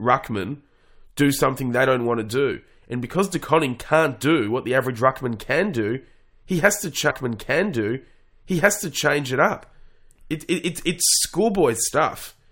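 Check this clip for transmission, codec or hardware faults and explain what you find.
There is one fault, a stream segment repeated, running from 7.09 to 9.09 s. The player fetched or queued the same two-second segment twice, so that stretch of speech plays again after a small blip at the jump back. On a waveform and spectrogram, a block of about 2.0 s appears duplicated, with a discontinuity at the seam.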